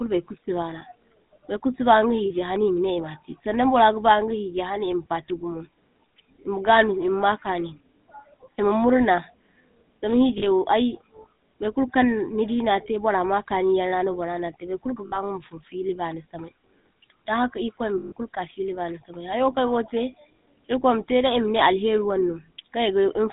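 Throughout, the speech carries the buzzy, gravelly roughness of the GSM full-rate codec, plainly audible and consistent with a 13 kbps coder. It models the vocal tract and drives it with sparse, regularly spaced pulses, and the band runs only from 150 Hz to 3.7 kHz.

Lost GSM frames occur at 2.26 to 2.31 s and 10.38 to 10.44 s (40 ms each), at 15.06 to 15.17 s just after "na te bar kul" (60 ms), and at 17.98 to 18.13 s just before "kulu ka fili bani" (140 ms). The decoder repeats the last good frame, so each gap becomes a rough, metallic ring.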